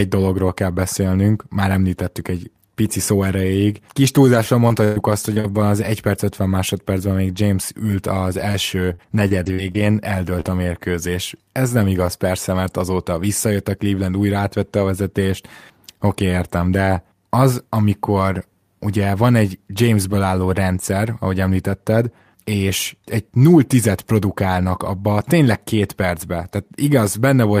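Lost packets rebuilt from error correction, at 3.77 to 3.79 s and again at 8.54 to 8.56 s, affect this speech recording. Each time a single 20 ms packet went missing, but the following packet carried a low-bitrate spare copy of it. The decoder played that copy instead of leaving a hole, so nothing drops out. Those two brief moments just come through coarser and grainier than the audio around them.

Repeated packet loss, heard as a robotic, choppy texture, hits two stretches. From 4.34 to 5.46 s there are four separate gaps, about 200 ms missing in total, the longest 119 ms. From 8.94 to 9.81 s there are five gaps, about 140 ms missing, the longest 48 ms. In each stretch about 17 % of the time is patched by extending the previous sound. Some of it, around a tenth of a second per stretch, is rebuilt from spare copies. Because the holes follow one another so closely, the sound turns choppy and broken.

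Short concealed packet loss occurs at 8.52 to 8.56 s, where 20 ms was lost, overlapping the rebuilt packet. It occurs again at 10.41 to 10.46 s, where 40 ms was lost. The receiver filled each hole by continuing the last sound and then blended back into the real audio. The result is a quick smear or wobble.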